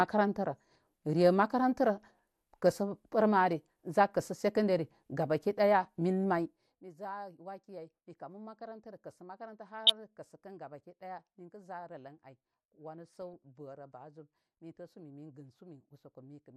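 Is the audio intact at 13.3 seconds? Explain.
No. From 13.22 to 13.34 s there is DAB burbling: bit errors that slipped past error correction corrupt sub-band samples and scale factors, so isolated bands blip with noise and jump in level. On a spectrogram this shows as short, blocky bright patches in single frequency strips.

Beneath it, the speech has a dull, granular quality, likely from MP2 compression at 80 kbps, with upper sub-bands switched off. A spectrogram shows a hard upper cutoff with flickering gaps.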